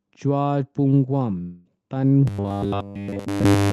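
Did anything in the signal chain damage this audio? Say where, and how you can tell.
Yes. A long network dropout runs from 1.41 to 1.67 s. The receiver papers over the gap with a fading continuation of the preceding sound rather than silence, and about 240 ms of audio never returns, likely a burst of lost packets.

Robotic sound from repeated short buffers starts at 2.28 s and continues to the end. A rigid 100 Hz metallic buzz runs throughout, which fits a 10 ms buffer being replayed while new audio arrives too seldom, likely a starved jitter buffer.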